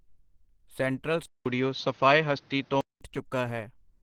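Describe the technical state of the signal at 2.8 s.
At 2.8 s the speech sounds dull and band-limited, with nothing above 6.6 kHz, a level shift of around 5 dB and a new noise floor roughly 35 dB down. This is likely an input switched to a poorer device, in effect from 1.26 s, after a 200 ms silence, until 3.01 s. Over that, the sound is muffled and plainly hoarse, which points to Opus compression in hybrid mode at about 16 kbps, thinning detail throughout.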